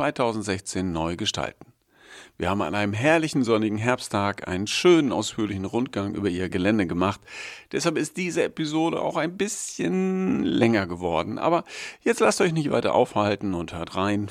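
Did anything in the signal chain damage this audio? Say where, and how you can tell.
No, nothing along the chain seems to have damaged this speech recording, and there's no stage I'd point to as having left a mark on it.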